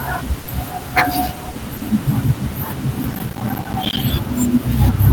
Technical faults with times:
0.43-0.47 sound dropped by the voice detector
1.51-1.55 sound dropped by the voice detector
3.03-3.97 processor overload crackle

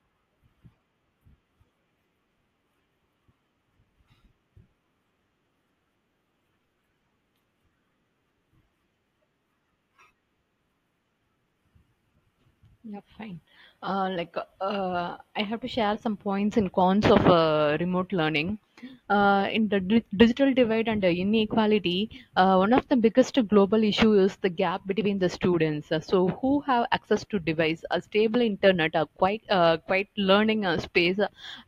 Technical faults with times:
0.00-31.68 crude rate conversion

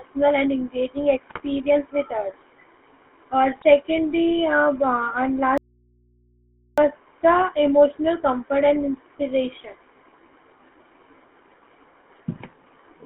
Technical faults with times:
0.00-13.06 GSM full-rate codec
1.30-1.41 GSM bit errors
3.56-3.64 GSM bit errors
5.58-6.78 audio dropout to a faint residue

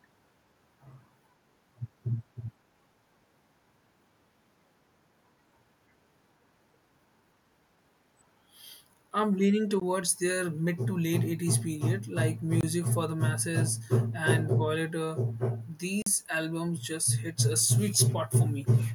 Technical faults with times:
9.80 block of digital silence
12.61-12.63 block of digital silence
16.02-16.06 block of digital silence
17.57-17.64 echo leak
17.91-18.14 echo leak

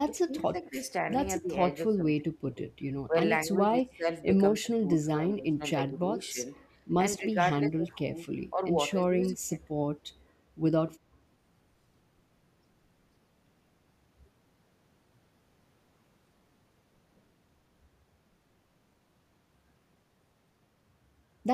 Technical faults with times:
0.06-1.08 speech suppressed in double talk
1.40-2.59 speech suppressed in double talk
3.08-4.24 speech suppressed in double talk
4.56-6.40 speech suppressed in double talk
7.18-8.18 speech suppressed in double talk
8.52-8.62 speech suppressed in double talk
8.93-9.60 speech suppressed in double talk

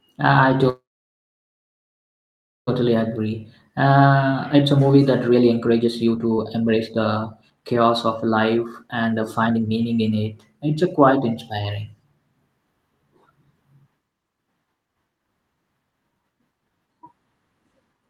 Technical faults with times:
0.69-2.69 call audio freeze
2.81-10.76 jitter buffer speed-up

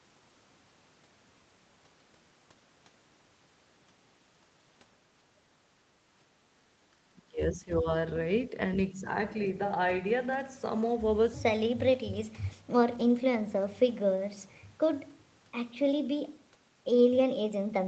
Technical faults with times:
7.19-7.87 speech suppressed in double talk
8.49-8.54 speech suppressed in double talk
8.94-9.07 speech suppressed in double talk
11.93 lost packet rebuilt from error correction
12.91-13.01 lost packet rebuilt from error correction

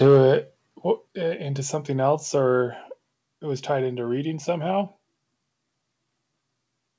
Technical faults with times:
0.02-0.22 microphone overload
0.07 microphone volume stepped down
1.08 microphone volume stepped down
3.12 microphone volume stepped down

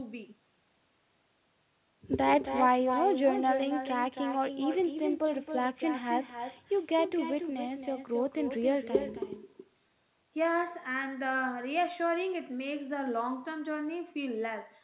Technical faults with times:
0.00-14.83 echo with no canceller

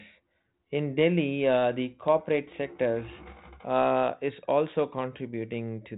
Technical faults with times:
none

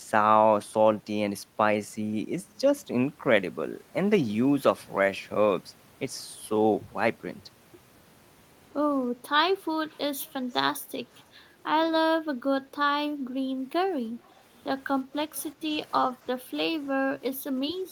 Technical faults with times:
9.89-10.59 echo leak
11.13-11.23 echo leak
14.28-14.41 echo leak
15.35-15.42 echo leak
16.13-16.50 background gated by the echo canceller

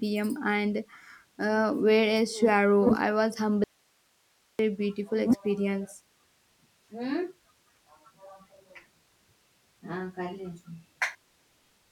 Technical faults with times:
3.64-4.59 audio dropout to a faint residue

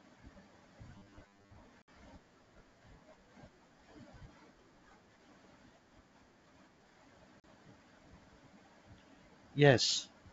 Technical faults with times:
0.95-1.55 robotic sound from repeated short buffers
1.82-1.88 packet loss on an ADPCM call
7.40-7.44 packet loss on an ADPCM call

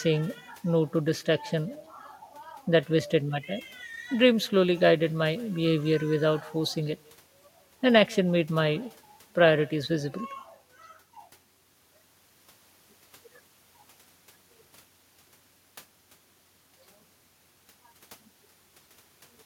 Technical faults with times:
0.00-19.45 echo with no canceller

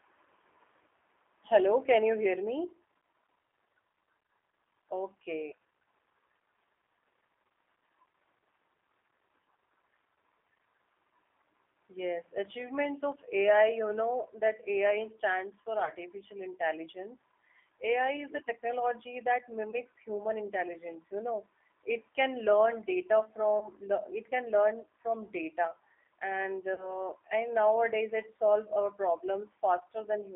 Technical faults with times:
0.00-30.36 G.729 codec
15.85-15.91 VoIP packet loss concealed by the speech codec
19.71-19.76 VoIP packet loss concealed by the speech codec
23.59-23.69 VoIP packet loss concealed by the speech codec
26.74-26.95 VoIP packet loss concealed by the speech codec

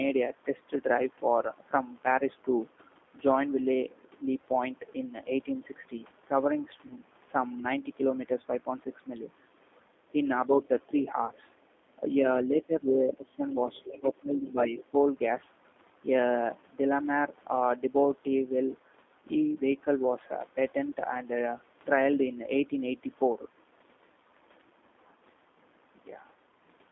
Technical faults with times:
0.00-26.91 G.729 codec
6.87-6.96 VoIP packet loss concealed by the speech codec
11.26-11.32 VoIP packet loss concealed by the speech codec
13.73-14.10 other side's voice leaking through
13.99-14.75 speech suppressed in double talk

